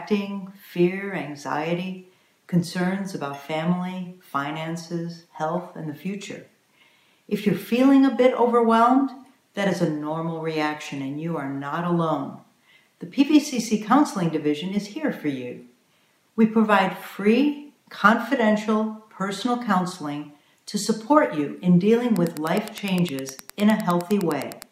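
From 22.07 s to the end at 24.7 s, a steady ticking about ten times a second sits around 20 dB below the sound. This is Wi-Fi interference: a nearby Wi-Fi radio's beacon, sent every 102.4 ms, is rectified by the audio circuit.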